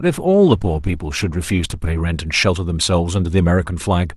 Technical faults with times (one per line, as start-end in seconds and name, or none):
0.00-2.00 adaptive stream starting at a low bitrate